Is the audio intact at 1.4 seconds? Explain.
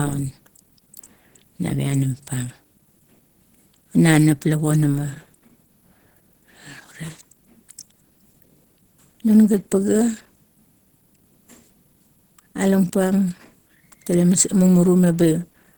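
No, Opus compression damage is audible at 1.4 seconds and throughout the clip. The speech sounds muffled, hoarse and grainy, likely from a low-rate hybrid mode that codes the lower band as speech and fills the upper bands coarsely, which fits roughly 16 kbps.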